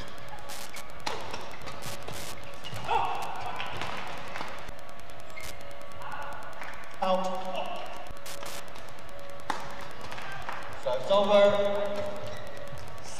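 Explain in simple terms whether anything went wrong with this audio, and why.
There's Wi-Fi interference running through the whole clip: a faint, steady ticking about ten times a second, sitting well below the sound. A nearby Wi-Fi radio's regular beacon, every 102.4 ms, is getting picked up and rectified by the audio circuit.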